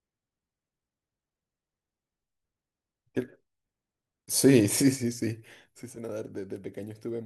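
A speech recording with a sudden gain jump at 5.82 s: from that sample to the end, the voice and the background noise drop together by about 12 dB. The likely cause is a digital gain change applied instantly, without a ramp.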